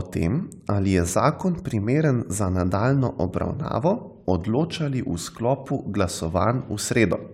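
No faults to report anywhere in this speech recording.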